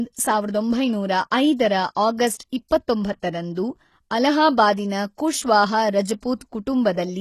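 HE-AAC compression runs through the whole speech clip and is plainly audible. Nothing sounds above 12.3 kHz, and the treble sounds rebuilt rather than captured: s sounds turn gritty and metallic. The likely cause is spectral band replication at a bitrate around 16 kbps, with upper bands copied from lower ones.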